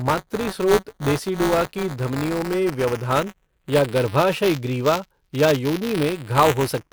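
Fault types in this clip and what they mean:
Buffer tearing: Throughout the speech a steady robotic buzz rides on the sound at about 188 Hz, a rattle that lives inside the signal rather than sitting beneath it. The playback writer and the hardware reader of the ring buffer have drifted out of step and cross within every period, a rate that fits a 256-sample buffer. A small slice of each period, roughly a twentieth, carries audio from about 15 ms earlier, hard-spliced in on both edges.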